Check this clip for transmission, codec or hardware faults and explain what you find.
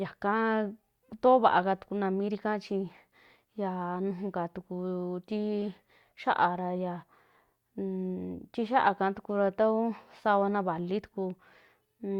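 Nothing stood out on listening to this speech recording.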